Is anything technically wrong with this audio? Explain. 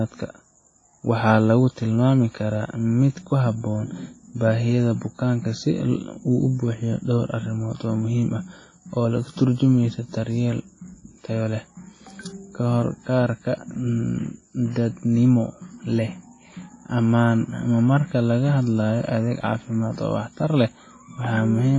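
Yes. Throughout the speech there is heavy transform-codec damage, likely WMA compression at a low bitrate around 24 kbps. The encoder quantises long blocks, so noise smears over tens of milliseconds and weak spectral lines vanish, leaving a ringing, washy quality with hiss that swells and fades with the voice. Nothing remains above 10.6 kHz. Unlike a plain low-pass filter, which only dulls the top, this also pre-echoes within the remaining band.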